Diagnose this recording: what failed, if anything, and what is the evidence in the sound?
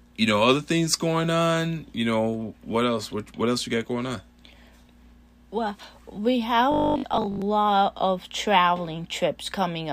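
From 6.72 to 7.42 s the speech collapses into a rigid, metallic buzz pitched at 50 Hz, still loosely tracking the syllables. This is robotic sound from repeated short buffers, at the driver or buffer stage. The likely cause is audio arriving too seldom, so the playback side loops its last chunk to fill the gaps. A 50 Hz buzz fits a 20 ms chunk, and most of the real audio in that stretch is skipped.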